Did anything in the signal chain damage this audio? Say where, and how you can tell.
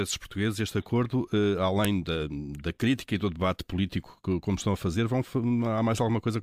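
Yes. There is a sharp, loud click at 1.85 s, a single snap lasting only a moment. It does not follow the speech around it. The stage is storage, where separate WAV pieces were joined. This is a file header played as audio. The joining kept the second piece's header instead of stripping it. Those few dozen header bytes were read as samples, and that produced the snap at the start of the second piece.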